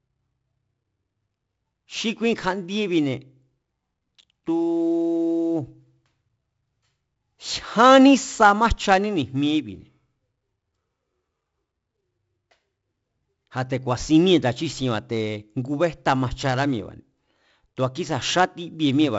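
All the way through, the speech carries 4-bit ADPCM compression grit, a level-following hiss and rough attacks, and nothing above 7.7 kHz, which fits a 16 kHz, 64 kbps stream.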